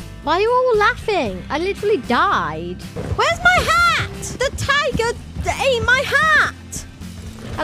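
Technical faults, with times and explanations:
Nothing technical to flag here; the audio runs without any audible faults.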